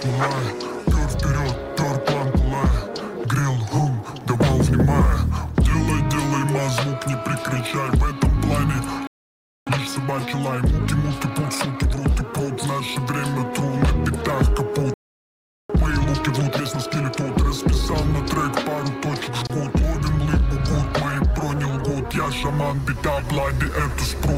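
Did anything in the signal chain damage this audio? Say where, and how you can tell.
Yes, at playback. The sound cuts out mid-flow twice: from 9.07 to 9.67 s, about 0.6 s of silence, and from 14.94 to 15.70 s, roughly 0.76 s. That's the signature of a playback stall, most likely the player's buffer running dry or its output thread getting blocked, so nothing reached the output until it recovered.

Right after each dropout you can hear time-compressed catch-up. From 9.67 to 12.05 s everything runs at 1.25 times normal speed, and from 15.70 to 17.20 s it's pushed harder, to 1.5 times. The pitch doesn't move. The player is clawing back its backlog by snipping out tiny chunks and cross-fading over the seams, which is why it sounds rushed but not chipmunky.

There's one more, smaller problem at 19.47 to 19.50 s: a gap at a join of encoded pieces, a gap of about 27 ms dropped into otherwise continuous sound. 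The codec smears its edges, and the sound carries straight on afterwards. That points to separately encoded segments spliced without trimming, so one encoder's end-of-stream padding and the next one's start-up delay both stayed in at the join.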